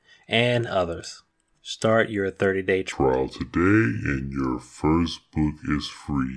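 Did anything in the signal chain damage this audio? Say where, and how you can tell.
Yes. At the playback stage, a wrong sample rate takes over from 2.92 s to the end. The speech drops to 0.69 times speed and about 6.5 semitones lower, which fits 32 kHz audio played at 22 kHz. Tempo and pitch fall together, unlike a pitch shifter or time-stretch.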